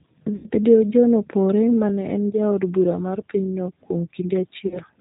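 G.729 coding runs through the whole clip, and its damage is plainly audible. The speech is rebuilt from a vocal tract filter, a pitch predictor and a few pulses per frame, which fits the 8 kbit/s G.729A variant. Nothing above 4 kHz survives, and the voice sounds rough and synthetic.

VoIP packet loss concealed by the speech codec strikes at 0.36 to 0.47 s, covering about 80 ms of missing audio, which points to four lost packets. The decoder extends its last pitch and filter with falling gain, so the speech smears into a fading buzzy tone or coloured noise. The same happens at 4.67 to 4.79 s, where about 40 ms goes missing, which suggests two packets. Because each frame builds on the previous one, the voice stays weak or distorted after both gaps, until the decoder recovers.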